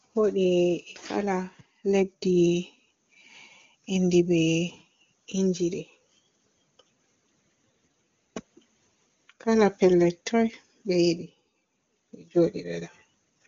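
There are no technical faults to describe at any point; the speech comes through an AMR wideband (HD Voice) codec at 23.85 kbit/s, with nothing above 7.2 kHz.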